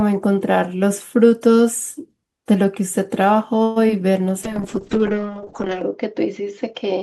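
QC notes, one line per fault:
3.63–3.78 s, call audio freeze: the speech stalls into a fading buzz for about 125 ms, likely delayed packets emptying the jitter buffer, then resumes where it stopped.
3.88–3.91 s, short concealed packet loss: about 20 ms never arrived in time, so the decoder briefly extended the preceding sound and blended back, leaving a small smear.
4.44–7.02 s, call bitrate drop: the encoder fell from 32 to 6 kbps, bandwidth narrowing from 20 kHz to 8 kHz, so the speech turns coarse and muffled, bottoming out for 1.37 s.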